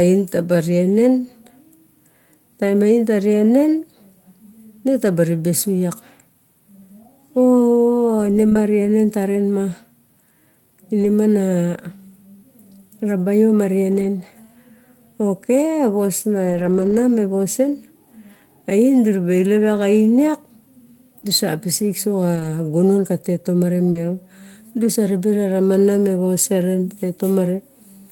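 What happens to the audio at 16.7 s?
Around 16.7 s the sound turns briefly rough and grainy, from 16.49 to 16.99 s: a lost packet rebuilt from error correction. Thirteen separate packets went missing, but each following packet carried a low-bitrate copy of the one before, and the decoder played those copies, about 260 ms of rebuilt audio. Unlike plain loss concealment, nothing drops out or smears into a buzzy guess; the sound stays continuous, just coarser and noisier.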